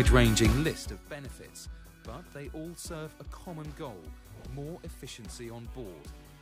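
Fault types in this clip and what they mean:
No technical faults can be heard in the signal.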